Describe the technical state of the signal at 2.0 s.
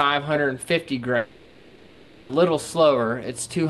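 At 2.0 s the sound is inside a gap from 1.17 to 2.31 s, likely a long network dropout. The receiver filled all of it, stretching the last sound into a fading buzz. Full audio returns at 2.31 s, with the lost part gone.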